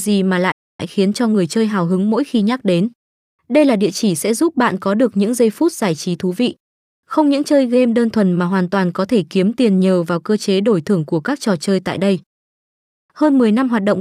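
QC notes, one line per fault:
0.51–0.80 s, playback stall: the speech cuts out in mid-flow and the output drops to silence for about 273 ms before the sound resumes. The sound simply stops and restarts, which is how a starved output behaves when nothing is left to play. The likely cause is the player's buffer running dry, or its audio thread being blocked, until data or scheduling recovered.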